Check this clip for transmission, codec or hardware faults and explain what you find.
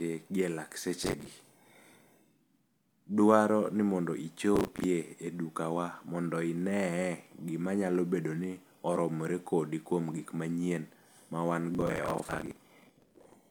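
Processor overload crackle occurs three times in this speech: 1.04–1.27 s after "gi e lak", 4.56–4.84 s between "ni mondo" and "e dukawa mondo", and 11.75–13.34 s. Repeated late buffers, which fit roughly 10 ms blocks, replay stale audio with hard edges, producing gritty tearing. The waveform shows dense, abrupt discontinuities, and the spectrogram shows clustered vertical broadband streaks.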